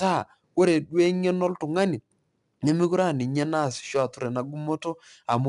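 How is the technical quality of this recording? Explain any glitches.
The recording is held back by one fault that runs through the whole speech clip.

4-bit ADPCM compression, throughout: each sample is coded as a small step from a prediction, leaving a gritty hiss that rises with every loud syllable and roughness on sharp onsets. Nothing sounds above 10.6 kHz, which fits a low sample rate and dulls the top end.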